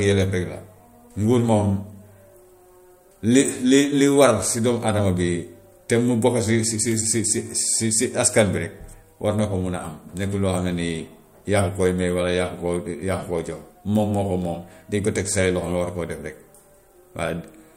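Dropped samples at 13.39 s produce one sharp click. A handful of samples, well under a millisecond, are likely missing, so the speech waveform jumps abruptly.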